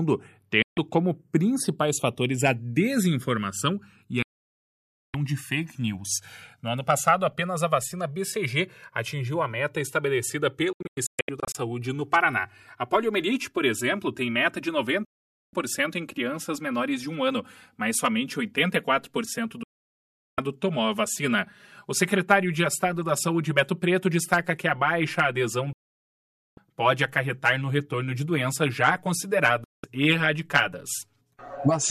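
From the start, channels drifting apart: the two channels run on separate clocks, off by around 200 ppm, so their delay creeps toward roughly 7 ms, heard as slow flanging. Digital broadcast dropouts, where the receiver loses the signal and mutes, cut the sound to silence at 0.62, 4.22, 10.73 (several short holes), 15.05, 19.63, 25.73 and 29.64 s, for 0.14 to 0.91 s each.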